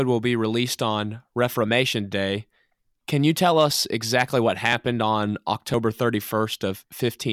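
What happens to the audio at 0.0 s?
Nothing goes wrong at 0.0 s; the audio is intact there, with no dropout, click or distortion at that point.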